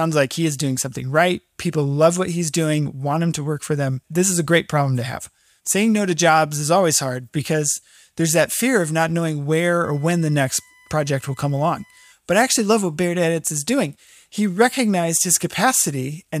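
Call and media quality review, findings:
USB whine, 9.84 to 12.12 s, starting after "of not knowing where". Fixed-pitch tone on a 1 kHz fundamental, strongest at the 2 kHz harmonic, about 35 dB below the speech. Probable source: power or ground picking up current draw from the USB bus's 1 ms frame cycle. Distinguishing marks: pitch is locked to 1 kHz multiples, unlike 50/60 Hz mains hum.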